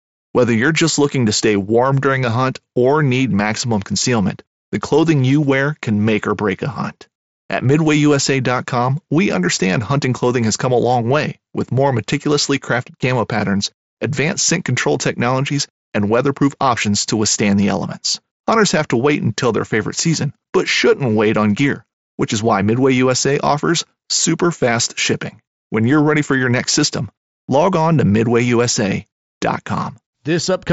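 No technical faults occur anywhere in the speech.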